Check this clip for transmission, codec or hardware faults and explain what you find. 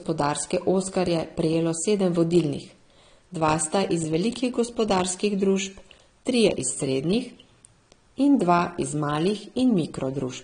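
The speech carries AAC compression damage for its whole length. Nothing reaches above 9.7 kHz, so the top of the spectrum is simply missing and the sound is dull. Sibilants smear and turn fizzy, and sustained sounds warble. The likely cause is a low-bitrate AAC-LC encode, which fits about 32 kbps. At that rate the encoder quantises each frame's frequency lines coarsely. It drops the highs and leaves gaps that shift from frame to frame.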